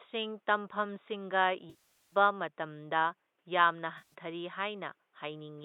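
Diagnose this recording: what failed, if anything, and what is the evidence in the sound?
AAC frame loss with concealment, network stage: 1.70–2.15 s smears and fades toward silence, while 3.98–4.14 s is a brief phasey patch. It is smeared fill rather than the abrupt silence of a plain dropout.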